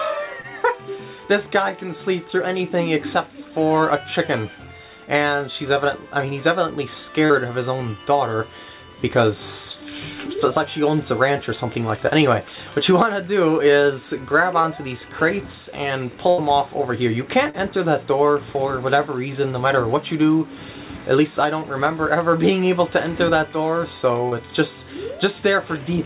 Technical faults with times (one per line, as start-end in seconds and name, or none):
0.42-0.46 short concealed packet loss
7.26-7.32 short concealed packet loss
14.62-14.66 short concealed packet loss
16.30-16.40 burst of packet loss
17.50-17.55 short concealed packet loss
24.29-24.33 short concealed packet loss